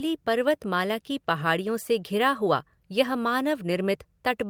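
No technical faults are audible.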